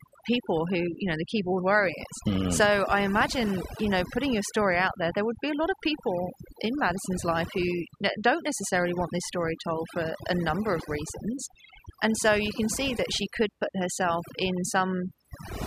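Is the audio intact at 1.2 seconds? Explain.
No. At 1.2 seconds the gaps around the speech fall to near silence scattered with twinkling specks. This is overdone noise removal, present throughout the clip rather than at this moment alone. A noise reduction stage set far too aggressively is cutting individual frequency bands down or out whenever they sit close to its noise estimate, so the quieter components of the voice are stripped away along with the noise.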